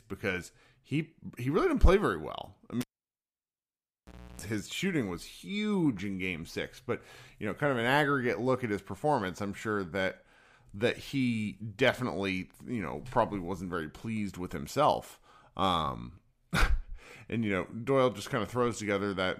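Speech, interrupted by a cable pulled and plugged in between 2.81 and 4.42 s. A pop marks the plug leaving the socket, then the sound falls to near silence for about 1.56 s. As the plug goes back in, a 320 ms burst of 60 Hz mains buzz sounds while only the tip makes contact, and a second pop brings the speech back. That hum-and-click signature separates it from a digital dropout, which would cut cleanly with no buzz.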